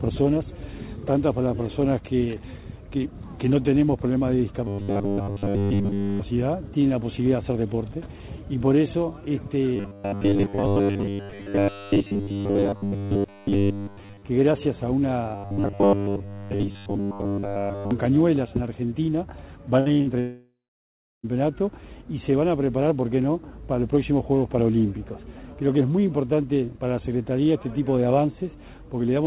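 From 4.68 to 6.21 s the sound collapses into a rigid, metallic buzz pitched at 100 Hz. This is robotic sound from repeated short buffers, likely caused by audio arriving too seldom so that a 10 ms slice is looped to fill the wait, and here nearly all of the stretch is repeated material. It returns from 9.76 to 14.25 s and from 15.35 to 17.91 s, with most of each span repeated. The fixed 100 Hz tone, locked to the loop length, separates it from ordinary choppiness.

From 19.80 to 20.08 s comes repeated packet loss with a robotic sound. A few short holes, the longest 56 ms, are each patched by stretching the preceding sound. About half of this span is concealment, so it sounds broken and stuttering with pieces missing. Unlike the earlier buzz, it is irregular and gappy.

Then, from 20.20 to 21.25 s, what is likely a long network dropout follows. About a second of audio never arrives. The receiver continues the last sound as a fading buzz, and roughly 0.7 s of near-silence remains before the audio resumes with that portion lost. 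This is one sustained outage rather than a cluster of brief holes. Throughout the clip, nothing is heard above 4 kHz, which fits the narrowband call codec on the line.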